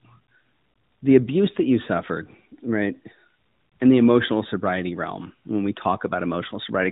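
No technical faults turn up in the signal, which carries the band-limited sound of the AMR narrowband mobile codec, with nothing above 4 kHz and only light coding damage, consistent with its 12.2 kbps mode.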